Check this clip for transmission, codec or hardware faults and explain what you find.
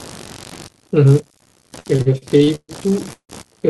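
Two faults are present: computer activity noise through the whole recording, and repeated stalls (stutter) in the second half.

Computer activity noise runs from start to end. Shifting current draw in the computer's processor, graphics or peripherals disturbs the ground shared with the audio circuitry, and that disturbance leaks into the signal. Here it comes through as a buzzy, pulsing texture at around 70 pulses per second, sitting roughly 25 dB below the speech. It varies with the machine's activity rather than with what is being said.

Repeated stalls (stutter) occur between 1.79 s and 3.32 s. Packets kept arriving late, so the receiver's jitter buffer ran dry nine times. Each time, it held onto and extended the last bit of speech until fresh data arrived. About half a second of stretched sound fills roughly a third of that stretch, and the longest hold lasts 0.16 s. No speech is lost, but the delivery drags and hiccups.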